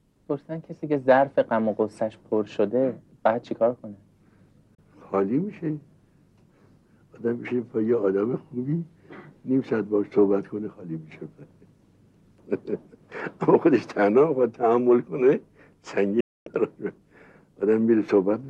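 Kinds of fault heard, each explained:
Digital broadcast dropout: failed frames make the receiver mute, leaving clean 32 ms and 256 ms silent holes, not analog fading's hiss.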